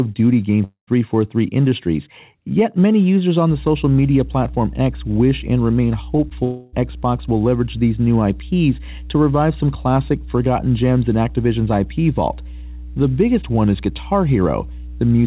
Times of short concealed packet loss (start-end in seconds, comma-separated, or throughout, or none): 6.17-6.32